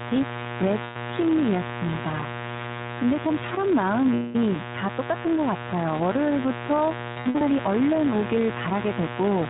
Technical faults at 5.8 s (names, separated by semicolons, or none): mains buzz; iLBC codec